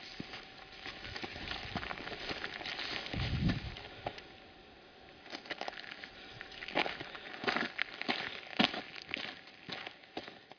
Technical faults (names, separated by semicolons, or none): none